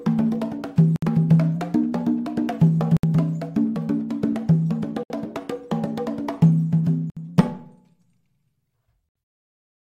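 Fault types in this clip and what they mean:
Gap at a join of encoded pieces: Short dropouts of about 63 to 67 ms cut into otherwise continuous sound roughly every 2 s, at 0.96, 2.97, 5.03, 7.10 and 9.09 s. Each has smeared edges, and the sound resumes exactly where it stopped. The pieces were encoded separately and joined without trimming, so the encoder's start-up delay and final-frame padding remain as silence at each seam.
Drift correction step: From 1.56 to 2.52 s and again from 7.28 to 8.62 s, the sound suddenly runs about 5.9% off speed, shifting pitch by about 99 cents, almost exactly a semitone. It then snaps back to normal. Speed and pitch move together, as a resampling rate change does. This likely comes from clock-matching software changing the playback rate in one step to refill or drain its buffer.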